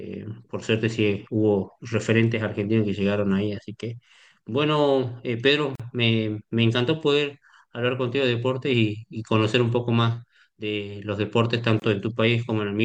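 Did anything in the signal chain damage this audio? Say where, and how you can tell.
Yes. At the codec stage, gaps at joins of encoded pieces occur at 5.75 s (42 ms) and 11.80 s (24 ms). Six-second segments were joined without trimming encoder delay and padding, so the speech resumes after a silence with smeared edges.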